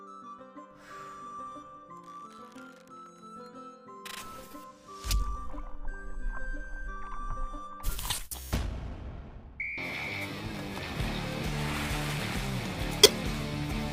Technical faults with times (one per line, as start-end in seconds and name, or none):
12.99-13.14 corrupt frame decoded